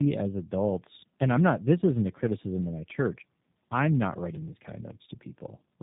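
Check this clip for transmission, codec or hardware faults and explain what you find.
Two faults are present: tandem speech coding across the whole clip, and a burst of processor overload crackle near the end.

Tandem speech coding runs throughout. The speech passed through G.729A at 8 kbit/s, out to G.711 A-law, then into G.729A again, so the second coder re-encoded already degraded output. Nothing reaches above 3.7 kHz, and the speech sounds muffled, rough and warbly. Unlike a single narrowband codec, the artefacts compound.

Processor overload crackle occurs from 4.26 to 4.68 s, just after "my church I'm not". Roughly fifteen buffers of about 10 ms each were missed and skipped, leaving hard-edged gaps. The result is a gritty tearing that stops when the load passes, rather than the smoothed dropouts of network packet loss.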